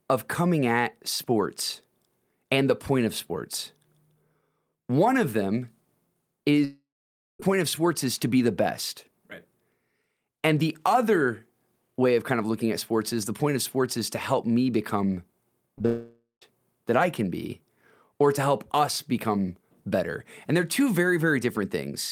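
Speech with two long network dropouts and two short concealed packet losses. From 6.64 to 7.40 s, about 0.75 s of audio is missing. The receiver stretches the last sound into a fading buzz or hiss, then leaves about 0.54 s of silence. The sound returns at "of sports is to" with the gap lost, likely from a network interruption. Just after "to help me become", two brief short concealed packet losses occur, at 15.78 to 15.81 s and 15.83 to 15.85 s. Each hole is only about a hundredth of a second. The decoder covers them by continuing the previous sound and blending back, which gives a quick smear or wobble. Right after, a second long network dropout runs from 15.86 to 16.42 s. About 0.56 s is missing. The fill fades to roughly 0.13 s of silence before the sound resumes, again likely from a network interruption.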